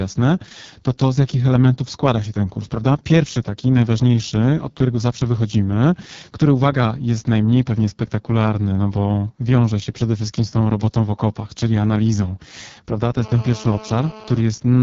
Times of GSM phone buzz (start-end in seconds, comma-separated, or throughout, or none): 13.21-14.41